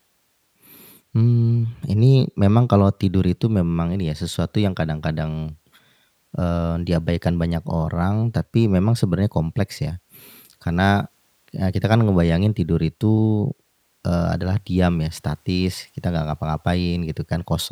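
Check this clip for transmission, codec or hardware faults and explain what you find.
Nothing stood out on listening to this speech recording that would point to a problem in how it was transmitted, encoded or captured.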